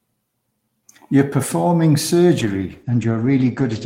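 Speech clip with a call bitrate drop from 2.4 s to the end: the encoder falls from 32 kbps to 12 kbps, bandwidth narrows from 20 kHz to 8 kHz, sounding muffled and rough.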